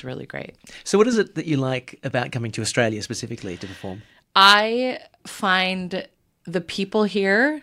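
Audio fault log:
No faults heard.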